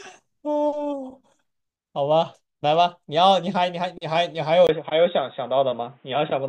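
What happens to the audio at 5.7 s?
At 5.7 s the speech is inside a band-limited stretch running from 4.67 s to the end: after a 20 ms gap, nothing remains above 3.8 kHz, the level shifts by about 5 dB, and a new noise floor sits roughly 45 dB down. This is likely an input switched to a poorer device, which leaves the voice dull and boxy.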